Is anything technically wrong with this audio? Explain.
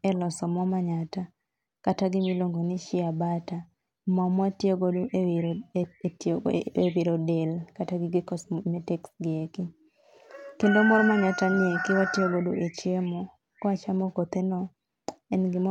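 No, nothing technically wrong can be heard in this speech recording. No problem turns up anywhere in the audio.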